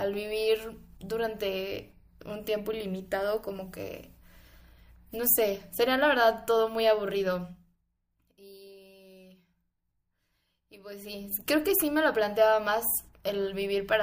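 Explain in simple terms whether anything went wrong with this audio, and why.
A fast ticking, like a zip being pulled, rides on the speech from 7.42 to 7.85 s as the volume drops sharply, and again from 10.67 to 11.26 s as it comes back up. This is zipper noise. Instead of gliding, the volume was changed in dozens of tiny jumps each second, with no smoothing between them. Every jump leaves a small click, and the rapid run of clicks makes the zipping sound.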